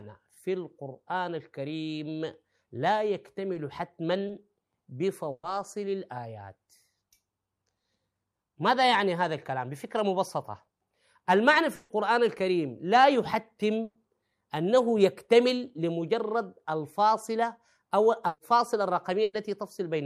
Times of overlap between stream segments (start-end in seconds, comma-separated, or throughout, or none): none